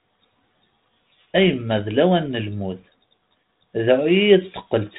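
No faults in the speech; the G.726 ADPCM path at 32 kbit/s shows only its expected light coding noise and telephone-band ceiling near 4 kHz.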